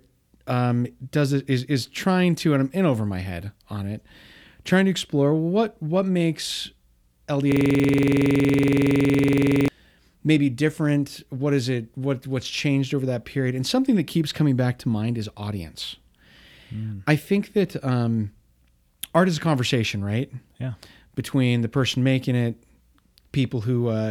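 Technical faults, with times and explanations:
7.52 to 9.68 s, system hang loop: The sound locks into one tiny slice of audio that repeats exactly, over and over, for just over two seconds. Each pass lasts about 46 ms, so the slice recurs 21.5 times a second. That gives a harsh, rattling buzz at that rate in place of the speech. The machine or driver stalled while the audio hardware kept replaying the same ring buffer. That fits a 2048-sample buffer.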